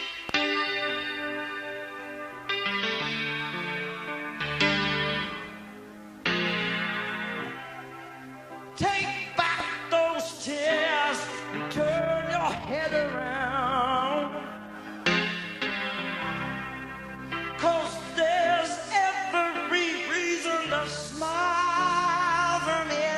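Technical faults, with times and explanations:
No technical faults are present, so there are no times or explanations to give.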